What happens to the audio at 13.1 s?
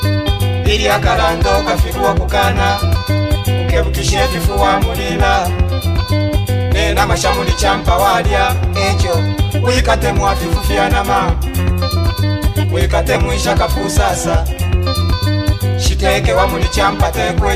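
At 13.14 to 13.16 s, Bluetooth LE Audio frames were lost in transmission, about 20 ms of audio, which fits two 10 ms LC3 frames going missing. With nothing to decode, the LC3 decoder concealed the gap by repeating the last good spectrum with its signs randomised. The sound in that brief window loses its tonal clarity and becomes a short, noisy smear, a hiss-like blur in place of the true signal before normal decoding resumes.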